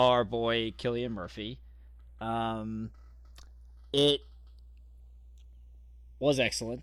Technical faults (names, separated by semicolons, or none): channels drifting apart